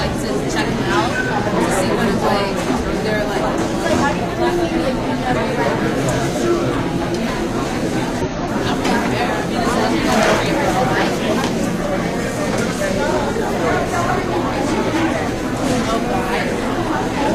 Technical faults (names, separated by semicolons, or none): compressed frames skipped